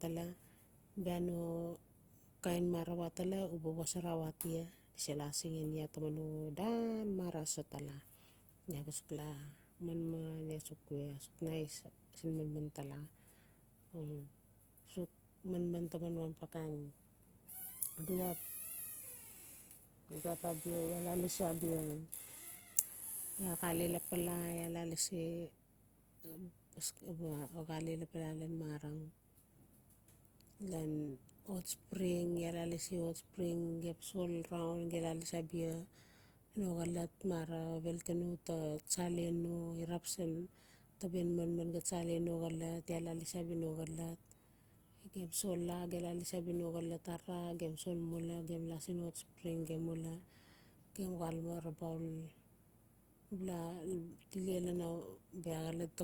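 A speech recording carrying plainly audible Opus compression from start to finish, likely from CELT-mode encoding at a low rate, around 24 kbps. Bandwidth stays full, with content reaching about 20.4 kHz. Instead of MP3's swirling, watery holes, this damage shows as grainy, rough, noise-filled texture, because emptied bands are refilled rather than left silent.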